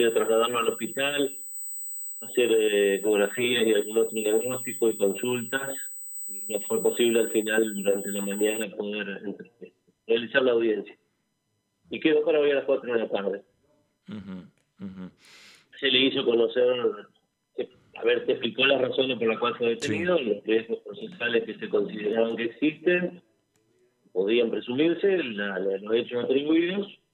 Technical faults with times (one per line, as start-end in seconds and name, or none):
0.00-8.63 USB whine